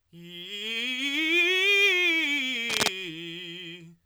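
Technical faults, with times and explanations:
2.69–2.88 s, cable scratch noise: a brief burst of dense, ragged scratching sits over the music, roughly as loud as the music itself, for about 0.19 s. The likely cause is a worn cable or connector being moved, its contact resistance jumping erratically.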